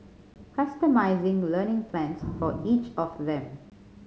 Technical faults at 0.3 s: packet loss on an ADPCM call

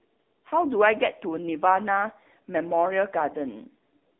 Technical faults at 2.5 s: AMR narrowband mobile codec

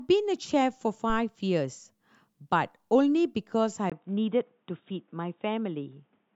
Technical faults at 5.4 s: input switched to a poorer device

